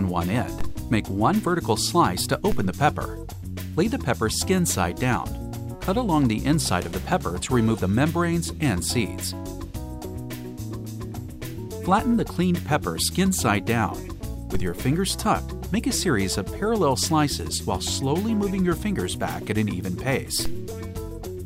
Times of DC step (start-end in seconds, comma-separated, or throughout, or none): 0.61, 2.52, 14.55, 20.45